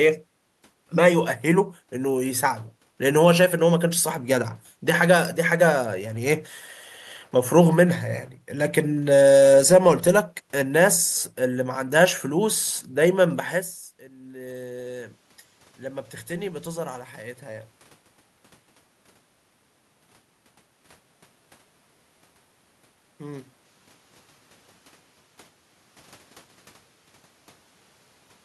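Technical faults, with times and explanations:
14.08 to 17.77 s, automatic gain rising: The talker moves away just before 14 s, and the input drops by about 18 dB. The gain control then climbs about 7 dB over nearly four seconds. Voice and room noise swell together, because it boosts everything equally.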